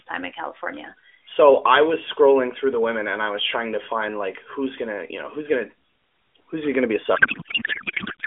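From 7.16 s, just after "he gonna be a", to the end, a codec payload misread sets in. The AMR frames are unpacked with the fields in the wrong places, which fits octet-aligned packing read as bandwidth-efficient. The speech becomes garbled, warbling noise that barely tracks it.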